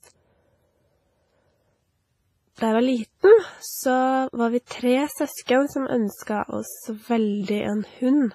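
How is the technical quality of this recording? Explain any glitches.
Pretty rough technically: the whole thing has a heavily processed, washy quality, with two spots where the codec smears ahead of sharp attacks.

Throughout, the speech rings and swims, with hiss breathing along with the signal and nothing above 15.3 kHz. That points to WMA compression, likely at a low bitrate around 24 kbps, where long transform blocks spread quantisation noise and quiet detail gets zeroed out.

At 4.66 to 4.71 s and 6.23 to 6.27 s there's pre-echo: a short hiss of about 45 ms and 38 ms arrives just before a sharp onset, softening it. The codec spreads noise across the whole block, including the quiet bit before the attack.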